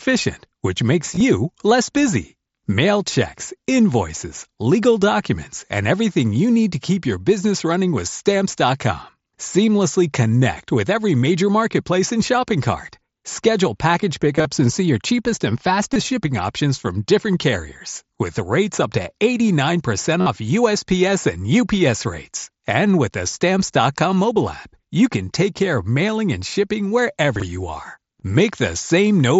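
Concealed Bluetooth headset packet loss occurs at 1.14–1.21, 14.36–14.45, 15.93–15.96 and 20.21–20.26 s. The receiver fills lost speech packets with repeated waveform cycles, so brief buzzy tones appear as periodic, flat-envelope stretches with stacked harmonics. At 27.36–27.42 s, chunks out of order place a 20 ms piece two chunks late, giving a jumbled moment with three hard vertical edges on the spectrogram.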